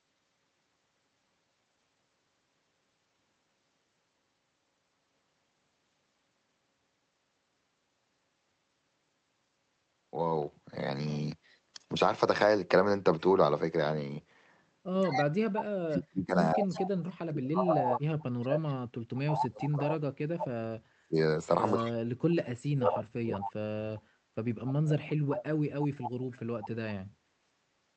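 From 15.03 to 15.23 s a faint delayed copy of the speech trails the talker by 164 ms, about 10 dB down, and returns at 16.61 to 17.96 s, 19.43 to 19.87 s (louder, about 5 dB down), 21.64 to 21.76 s (barely audible, about 30 dB down), 22.99 to 23.51 s and 24.66 to 26.68 s. This echo leak is likely a far-end loudspeaker echo the canceller failed to remove.

Between 15.07 and 24.06 s the talker's speech repeatedly sinks, at worst by around 40 dB, for roughly seven seconds in total. This is speech suppressed in double talk, likely the echo canceller ducking the talker while the echo was also present.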